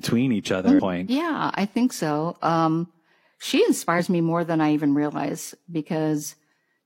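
At 0.75 to 0.79 s and 3.95 to 4.00 s the speech jumps ahead where compressed frames were skipped, either missing or rejected by the decoder. The first gap loses roughly 0.4 s and the second roughly 0.1 s, consistent with frames of about 46 ms, and each join is heard as a brief discontinuity.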